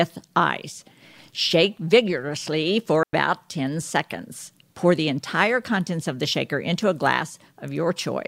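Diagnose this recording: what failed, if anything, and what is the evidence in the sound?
The failure is on the transmission side: a digital wireless dropout, so effectively the network or radio link rather than anything in the recording chain. Right after "vigorously for", the speech drops into near silence from 3.03 to 3.13 s, roughly a tenth of a second, then picks straight back up. There's no crackle or noise burst on either edge. The receiver lost too much of the data stream, muted with a very short fade, and resumed once the link came back.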